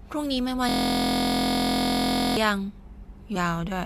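From 0.69 s to 2.37 s the speech locks into a system hang loop. The machine or its driver stalled while the sound hardware kept replaying the same ring buffer, so a single 23.22 ms slice repeats exactly, about 72 times. That short a loop fuses into a steady buzz at 43.1 Hz, which fits a 1024-sample buffer. Unlike a jittery stutter or dropout, the repetition is perfectly periodic and identical each cycle.

At 3.35 s a brief blip marks damaged data in a compressed stream. Some bytes in the encoded stream were corrupted, so the decoder misread or rejected those frames, lost sync and hunted for the next valid header. It differs from the hang loop because it is a single, non-repeating glitch instead of a sustained, evenly pitched buzz.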